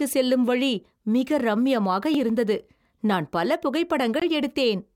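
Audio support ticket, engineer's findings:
Block of digital silence at 2.14 s (about 1 ms, heard as a tick) and 4.20 s (about 20 ms, a brief hole). Samples zeroed, probably buffer not filled in time. Hard edges, no fade or concealment, unlike a network dropout.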